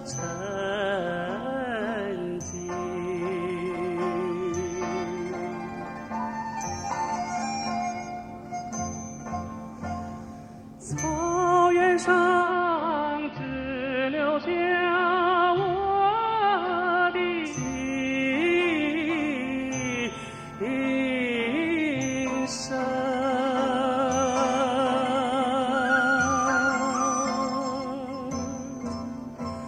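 From 12.4 to 17.58 s, faint hiss, treble gone, about 4 dB less level: digital radio blending to analogue AM.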